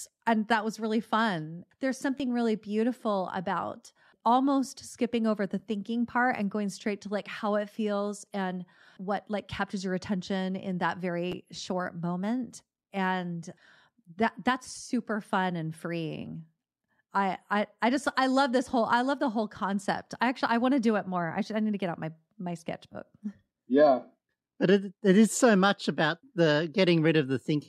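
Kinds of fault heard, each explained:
Repeated buffer: at 2.18 to 2.20 s and 11.32 s, fresh audio arrives late, so a 10.7 ms slice of speech replays, twice then once. Hard joins make a brief buzzy stutter, which fits a 512-sample buffer.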